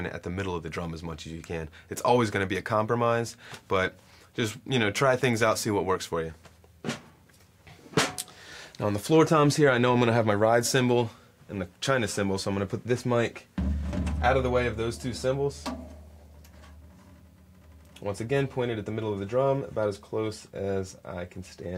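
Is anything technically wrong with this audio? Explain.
No, nothing technically wrong can be heard anywhere in this audio; the signal stays intact and steady throughout.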